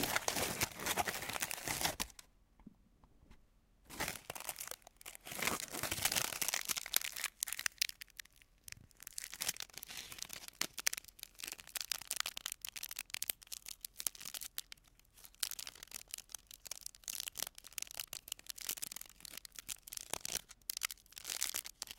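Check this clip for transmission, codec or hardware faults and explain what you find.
No faults turn up anywhere in this clip.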